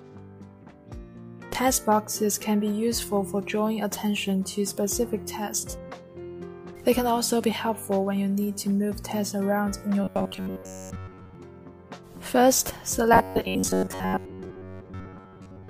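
Audio likely arrived too seldom, so short buffers of about 10.7 ms were repeated in place of most of the real audio, from 10.04 to 11.35 s and again from 13.13 s to the end. The result is robotic sound from repeated short buffers: a rigid, metallic 93.8 Hz buzz.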